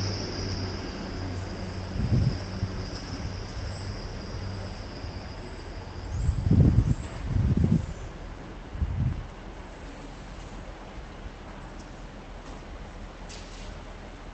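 The sound carries no audible faults, having passed through a call codec and jitter buffer in the ordinary way, with its high end limited to about 8 kHz, which fits Opus running at around 24 kbps.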